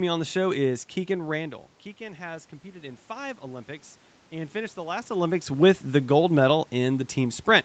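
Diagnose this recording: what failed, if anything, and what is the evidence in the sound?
Automatic gain rising in the call processing: after the input level falls by about 14 dB, the gain climbs by about 4 dB from 1.97 to 3.74 s, lifting voice and room noise together. The waveform envelope and noise floor rise steadily, and the spectrogram brightens evenly across all frequencies.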